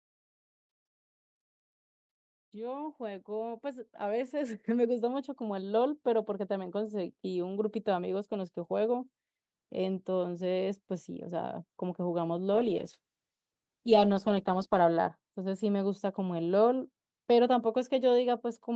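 Automatic gain rising from 2.51 to 8.61 s slowly lifts this speech recording and its background together by about 13 dB as the gain control reacts to quiet input. A call bitrate drop from 12.55 to 15.23 s makes the sound coarse and watery for about 2.3 s, which fits the encoder falling from 32 to around 9 kbps. The call path's normal 8 kHz ceiling is audible throughout.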